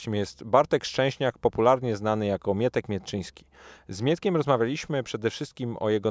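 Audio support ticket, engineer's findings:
No faults found in clip.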